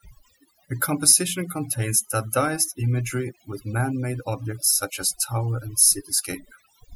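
From start to finish, the gaps between phrases fall to an unnatural near-silence scattered with twinkling specks. This is overdone noise removal: a noise reduction process applied far too strongly to a noisy recording. Frequency bands that sat close to its noise estimate were pushed right down or switched off, taking the quieter components of the speech with them and leaving isolated fragments that flicker in and out.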